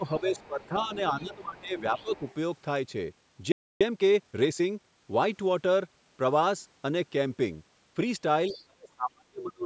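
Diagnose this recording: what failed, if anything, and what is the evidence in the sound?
Call processing stage, speech suppressed in double talk: the level sags by about 15 dB across 0.0–0.91 s and 1.18–2.22 s, for roughly half a second and 0.7 s in total, then by about 35 dB from 8.49 s to the end. The likely cause is an echo canceller that could not separate near speech from loudspeaker echo and attenuated both.

Call processing stage again, with the other side's voice leaking through: a second, fainter voice sits under the speech at 0.25–0.47 s, 0.64–0.96 s, 1.2–1.61 s, 1.97–2.35 s and 8.50–8.63 s, roughly 15 to 30 dB down. The likely cause is residual loudspeaker echo that the canceller left in the microphone path.

Playback stage, playback stall: the audio drops to silence mid-flow from 3.52 s to 3.81 s, a gap of 287 ms, before resuming. The pattern points to a likely buffer underrun or a blocked output thread starving the player of samples.

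Playback stage, time-compressed catch-up: from 3.81 s to 4.95 s the speech runs at 1.25 times normal speed with unchanged pitch. The player is trimming its backlog by dropping and cross-fading short segments after the stall.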